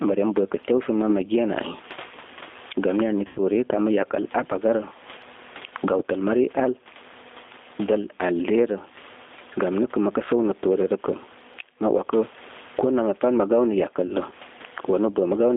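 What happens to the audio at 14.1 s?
VoIP packet loss concealed by the speech codec, from 14.06 to 14.13 s: the decoder fills about 30 ms of missing audio, likely a single lost packet, by extending its last pitch and filter at falling gain, giving a brief buzzy or noisy, fading smear.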